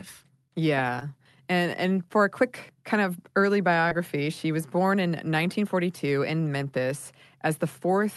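Two spots of short concealed packet loss, at 0.99 to 1.03 s and 3.89 to 3.93 s, the second right after "quick kind of early" and before "she was born in". Each time about 20 ms never arrived and the receiver patched it by extending the previous sound, so you get a quick smear or wobble.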